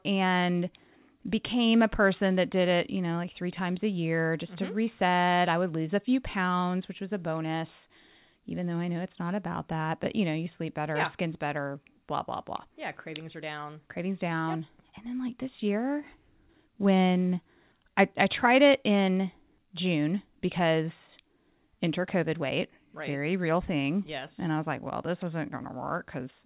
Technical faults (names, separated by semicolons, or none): none